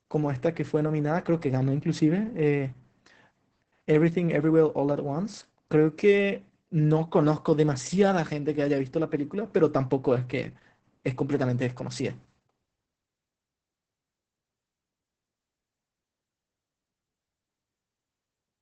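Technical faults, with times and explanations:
Throughout, Opus voice compression: the speech is muffled above 8 kHz and sounds heavily hoarse and slightly robotic. The codec's SILK linear-prediction mode models the voice as a filter driven by a coarsely coded excitation signal, which fits a bitrate near 10 kbps. Plain low-pass filtering would only dull the sound; this hoarse, synthetic grain is what marks it as a low-rate speech codec.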